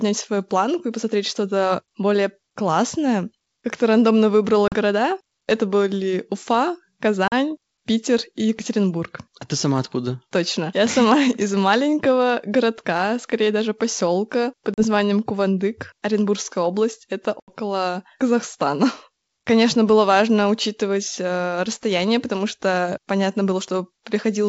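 Packet loss on an ADPCM call cuts this speech at 4.68, 7.28, 14.74 and 17.40 s with hard silent gaps of 40 ms (80 ms at 17.40 s), after which the out-of-step decoder resumes slightly distorted.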